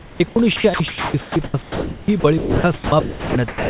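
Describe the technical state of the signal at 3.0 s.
At 3.0 s the speech falls in a choppy span from 0.0 to 3.7 s, likely sound chopped by the voice detector. About 2.4 s is comfort noise, so the waveform drops abruptly to a flat floor and the spectrogram shows speech bands vanishing into hiss below 4 kHz.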